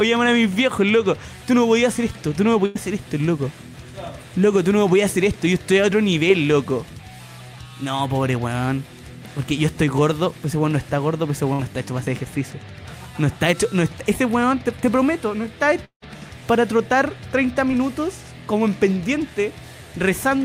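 At 2.65 to 2.77 s and again at 11.53 to 11.61 s there is a burst of packet loss: a short run of audio packets never arrived in time, so the receiver stretched the last sound it had and let it fade. The first gap fills about 95 ms with that decaying buzz or hiss, and the second about 57 ms. The sound then picks up roughly 100 ms and 60 ms further on, so those portions are simply gone.

From 15.85 to 16.04 s the audio cuts out for longer, most likely a long network dropout. The receiver again extends the last sound as a fading tone or hiss for about 169 ms, and this time it decays into roughly 90 ms of near silence before the sound returns. When it does, about 180 ms of material has been skipped.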